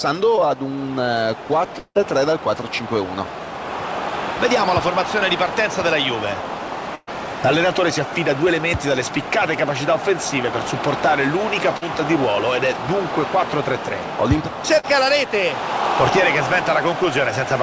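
At 0.36 to 0.39 s, a short concealed packet loss leaves a brief smear. About 20 ms never arrived, and the receiver stretched the previous sound across the gap.

From 1.79 to 1.97 s the sound turns into a fading buzz or hiss, then about 50 ms of silence. About 160 ms is gone, likely a long network dropout.

A burst of packet loss hits at 6.95 to 7.09 s. Roughly 120 ms is missing. The held sound fades into 30 ms of silence before the audio resumes further on.

Two more short concealed packet losses follow, at 11.77 to 11.83 s and 14.79 to 14.85 s. Each replaces about 40 ms with a brief wobble. Throughout, nothing is heard above 8 kHz, which fits a wideband call codec such as G.722.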